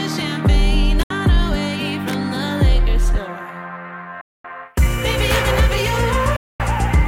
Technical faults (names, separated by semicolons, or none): Bluetooth dropout